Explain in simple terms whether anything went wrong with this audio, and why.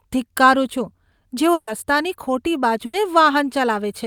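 A burst of packet loss hits this speech twice: from 1.53 to 1.69 s, just before "રસ્તાની ખોટી", and from 2.85 to 2.95 s, right after "જેઓ રસ્તાની ખોટી". Several chunks of audio never arrived in time, so the player stretched the last sound it had and let it fade, about 140 ms the first time, followed by a brief silence, and 80 ms the second. Then the speech jumps ahead, skipping what was lost.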